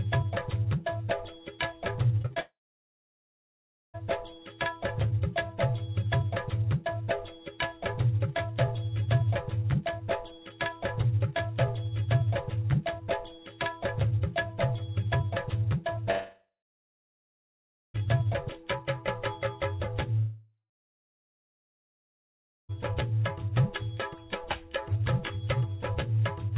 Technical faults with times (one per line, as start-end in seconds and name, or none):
2.22-2.38 short concealed packet loss
2.40-3.96 long network dropout
15.96-15.99 short concealed packet loss
16.11-17.99 long network dropout
20.19-22.71 long network dropout